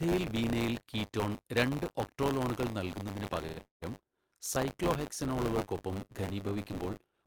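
Buffer tearing runs through the whole speech clip: a rattly, robotic buzz at 100 Hz that follows the speech and vanishes in pauses, unlike mains hum. Writer and reader have slipped, so about a tenth of each period replays audio roughly 30 ms old, with hard joins rather than silent gaps.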